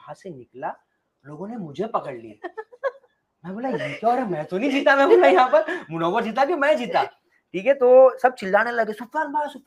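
Sound cut by the noise suppressor, between 7.11 and 7.54 s: the suppressor mistook part of the sound for background noise and pulled it down, by about 18 dB at the deepest point, with roughly 150 ms of the span dipped. Sustained and decaying parts sink or have their tails clipped early, while sharper onsets get through. The audio also shows the character of a WebRTC call path with Opus coding, its top end stopping around 12 kHz, which fits a rate near 32 kbps.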